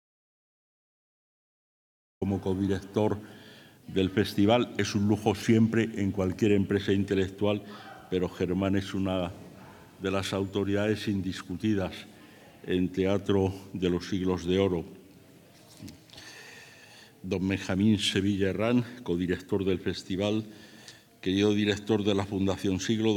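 From the very start until about 2.22 s the clip is in an audio dropout to silence: plain silence, with no room tone or hiss. The likely cause is a lost input while recording continued. Unlike a quiet pause or fade-in, the sound enters abruptly mid-flow rather than rising from ambience.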